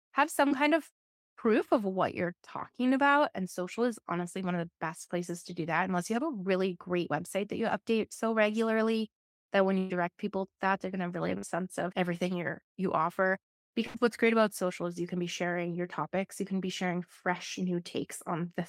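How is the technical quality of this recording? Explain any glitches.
The recording has four network dropouts in the speech, one brief and three longer, where audio failed to arrive and the receiver had to invent sound to cover the gaps.

At 0.47 to 0.54 s, just before "kind of proof of", there is a short concealed packet loss. About 40 ms of audio never reached the decoder in time, and roughly 32 ms of it was patched by extending the preceding sound from its own pitch or as shaped noise before crossfading back into real audio. It comes across as a quick smear or wobble, and a small sound there may be lost.

The three bursts of packet loss are at 9.79 to 9.93 s, between "so regularly that when" and "people to that they're"; at 11.38 to 11.46 s, between "going to really have" and "sense of everything you're"; and at 13.87 to 13.97 s. In each, a run of packets arrived too late or not at all, about 120 ms, 40 ms and 80 ms of audio respectively. 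The receiver stretched the last sound for about 112 ms, 48 ms and 76 ms, letting it fade. You hear a held buzz or dying hiss, then the speech picks up further along with a piece missing.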